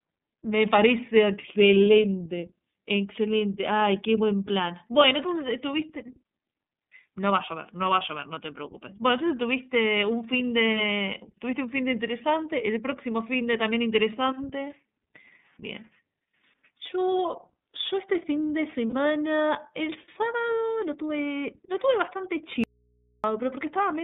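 From the start, the whole recording carries the iLBC codec. Everything is confined to a narrow telephone band of roughly 150 Hz to 3.7 kHz, so a spectrogram shows a hard ceiling with empty space above and a thin floor at the bottom. The speech has a plainly audible rough, slightly synthetic edge. That comes from each 30 ms frame being coded on its own at a low rate, which fits iLBC's 13.33 kbps mode.

At 1.41 s, lost iLBC frames create a 30 ms hole that the decoder patches by repeating the last pitch cycle blended with noise. It is heard as a brief buzzy hold on the vowel. On the spectrogram the harmonics freeze into flat, smeared stripes for one frame width. A second loss runs from 18.87 to 18.94 s, 60 ms long. In both cases the voice snaps back almost immediately, because each frame decodes independently.

From 22.64 to 23.24 s, about 0.6 s, an audio dropout to a faint residue occurs. 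The speech cuts off abruptly and only mains hum remains, sitting about 40 dB below the speech. The waveform collapses to a thin steady trace with square edges rather than a taper. The spectrogram goes blank apart from low horizontal hum lines. The signal was likely lost upstream while the rest of the path stayed live.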